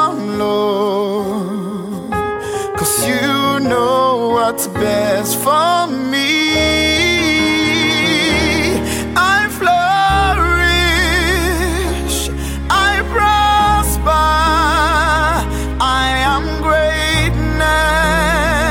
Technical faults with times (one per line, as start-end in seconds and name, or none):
none